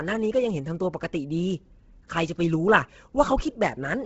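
Throughout the speech, heavy coding damage fits likely Bluetooth LC3 compression at a low bitrate near 16 kbps with 10 ms frames: nothing remains above 7.8 kHz, and the thinned upper band is refilled with noise. Unlike simple low-pass muffling, this leaves a breathy, grainy hiss.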